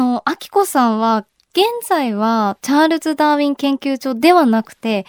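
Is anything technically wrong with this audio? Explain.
No, nothing technically wrong can be heard in this speech recording. There is no moment in it that calls for comment.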